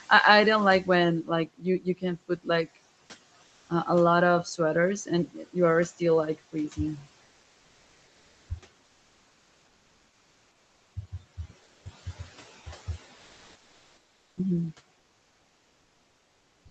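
Between 1.46 and 2.49 s, speech is cut by the noise suppressor. About 0.4 s of sound is pulled down, by up to about 17 dB, and sounds swallowed.

Comfort noise replaces the background at 3.47 to 3.69 s, 8.85 to 10.93 s, 11.63 to 11.85 s, 13.15 to 14.37 s, and 14.99 s to the end. The real room background gives way to flat, featureless hiss. Its level shifts by up to about 3 dB. The likely cause is Opus discontinuous transmission filling the pauses.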